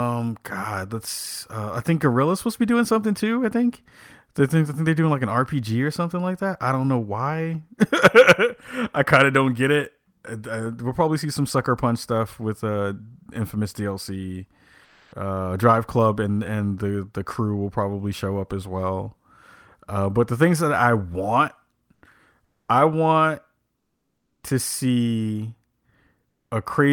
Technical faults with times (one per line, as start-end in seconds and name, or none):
14.84-15.12 comfort noise in place of the background
21.94-22.02 comfort noise in place of the background
22.44-22.68 comfort noise in place of the background
23.76-24.43 comfort noise in place of the background